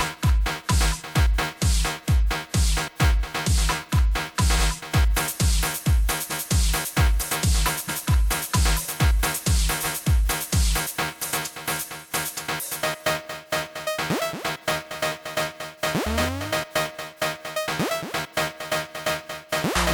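Short stutters interrupt the sound at 4.58 s, 6.30 s, 7.87 s and 9.82 s. These are repeated frames: a block of compressed audio played twice, 93, 186, 186 and 139 ms long, which points to frames of about 46 ms.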